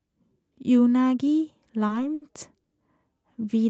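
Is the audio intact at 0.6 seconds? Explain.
Yes, the audio is intact at 0.6 seconds, with no dropout, glitch or other fault at that moment.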